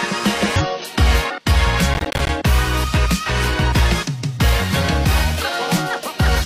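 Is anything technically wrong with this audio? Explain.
Yes, there are two faults.

From 0.56 to 0.62 s there is damaged data in the compressed stream. Corrupted bytes make the decoder misread frames, lose sync and hunt for the next valid frame header. The result is a brief glitch in the audio.

From 1.94 to 2.29 s there is processor overload crackle. The processor repeatedly missed its deadlines for short buffers, which fits buffers of about 10 ms. Around twenty of them came out as silence, each with hard edges, and together they produce a gritty crackle that stops at 2.29 s.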